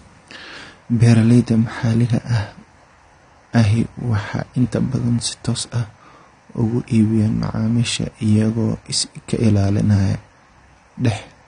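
Across the whole recording the speech sounds dull and smeared, with nothing above about 9.7 kHz and a warbling, fizzy texture on sibilants and held sounds. The likely cause is low-bitrate AAC compression, which fits AAC-LC at around 32 kbps. The encoder cuts the top band and coarsely quantises what remains.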